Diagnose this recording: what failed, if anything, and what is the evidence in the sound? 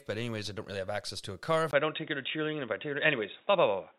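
Input switched to a poorer device at 1.71 s, lasting to the end. A gap of about 20 ms marks the switch. After it, nothing remains above 3.8 kHz, so the sound turns dull and boxy. The level shifts by around 5 dB, and a new background noise appears some 40 dB below the signal. At the driver stage, the system likely rerouted capture to a narrower-band microphone or a headset's call profile, which has its own tone, gain and noise floor.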